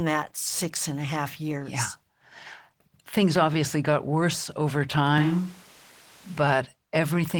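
Switch to a distant microphone, from 5.18 to 6.37 s in this speech clip, right after "obviously got worse over". The sound turns roomy and hollow, with the bass thinning out and room noise rising to roughly 25 dB below the speech, though the level stays about the same. This likely comes from the close microphone's signal dropping out, leaving a pickup further from the talker, before the close signal returns just as abruptly.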